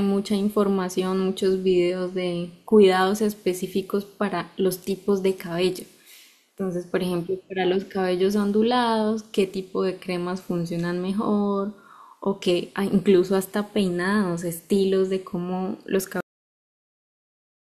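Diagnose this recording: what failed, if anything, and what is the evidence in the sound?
The problem's a cut-off end, a storage or buffer-flush fault. At 16.21 s the speech just stops mid-sound and drops straight to digital silence for the last 1.6 s, with no natural decay. The final buffers were never written out, so that audio is simply gone.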